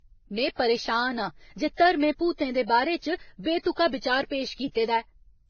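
Speech, with the marks of transcoding between lossy codecs audible throughout: nothing survives above about 6.5 kHz, and the first codec's artefacts sit under a second layer added by the later one. What separates this from a single low-bitrate encode is that two distinct textures are present at once. The low cut-off points to a very low-rate first pass, likely Vorbis, later re-encoded at a more generous rate, fitting WMA.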